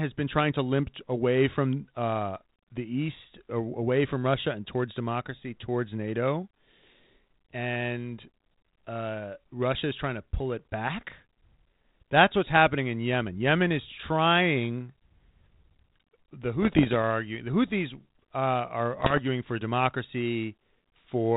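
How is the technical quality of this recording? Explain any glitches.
The speech comes over a narrowband 32 kbit/s ADPCM path, so nothing above 4 kHz and a light grain, and two glitches stand out.

From 16.62 to 16.95 s and again from 18.97 to 19.21 s there are bit errors on an ADPCM link. Somewhere under one percent of bits got flipped, and each one throws off the decoder's step size and predictor. You hear pops and rough bursts with the level jumping briefly before settling.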